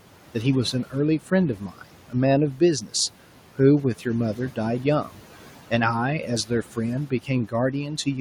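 Noise suppressor artifacts run through the whole recording: the suppressor judges each frequency band frame by frame and pulls down whatever it takes for steady noise, here by about 12 dB. The room noise, sitting about 19 dB below the speech, drops away in the gaps and swells back under each phrase.

From 1.57 to 2.14 s comes speech cut by the noise suppressor. The suppressor mistakes parts of the speech for background and turns them down along with it, with the deepest dip reaching about 12 dB. Only parts of it are hit, adding up to roughly a fifth of a second within that stretch. The affected bits of speech there sound swallowed, briefly fading.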